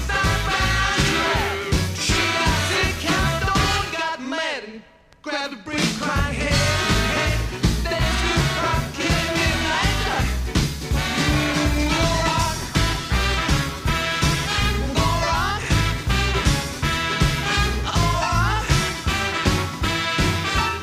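From 11.35 s to about 15.31 s there is a call bitrate drop. The sound turns coarse and dull, with its high end gone, for roughly 3.9 s before clarity returns. The quality of this degradation points to the bandwidth estimate collapsing from around 128 kbps to about 24 kbps, forcing the encoder to quantise harshly and discard upper frequencies. Unlike packet loss, it has no gaps, clicks or robotic repeats. The stretch is coarsely coded instead.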